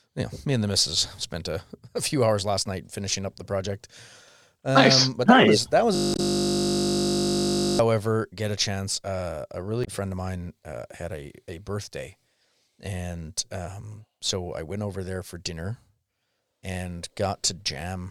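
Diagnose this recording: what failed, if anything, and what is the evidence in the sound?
The driver or buffer stage failed with a system hang loop from 5.95 to 7.79 s. One 20 ms slice of the speech repeats exactly, about ninety times, producing a steady 50 Hz buzz instead of a stutter because the looped piece is so short. That points to the host stalling while the audio hardware kept replaying the same small ring buffer. A dropout would go silent, and a stuck codec would not repeat a fixed waveform.

At the codec or storage stage there is damaged data in a compressed stream, heard as two short blips at 6.13 s (inside the buzz) and 9.81 s, each lasting about 70 ms. The decoder hit corrupt frames, lost sync and resynchronised on the next valid header. Unlike the hang loop, nothing repeats. Each event is a single brief disruption.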